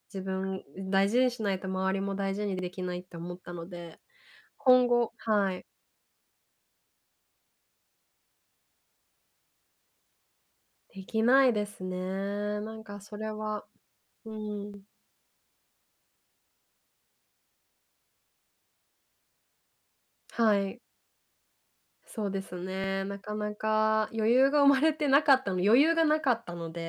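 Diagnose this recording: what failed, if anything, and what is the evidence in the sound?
The fault is overlapping chunks at the buffer stage. A 50 ms piece of speech repeats at 2.59, 6.64, 10.69, 14.74, 18.79 and 22.84 s, each heard as a short stutter. The audio was handled in 4 s blocks. Each block restarts 50 ms early.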